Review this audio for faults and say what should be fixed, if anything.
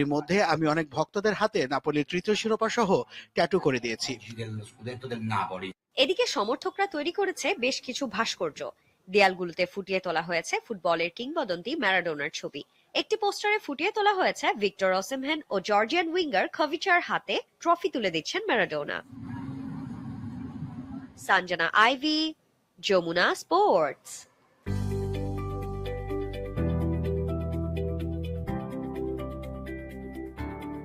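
Throughout, the level pumps and held tones thin out, swinging by roughly 5 dB. A speech-tuned noise suppressor applied to music or sounds is treating sustained material as noise.

Sound cut by the noise suppressor dips sharply, by about 9 to 12 dB, at 4.16–4.36, 4.65–4.86, 8.72–9.08, 12.64–12.94, 21.04–21.2, 22.36–22.82 and 24.25–24.66 s, and from 29.56 s to the end. Each dip pulls down steady or decaying sound.

To prevent both, disable the speech noise suppressor or switch it to a music mode for this kind of material.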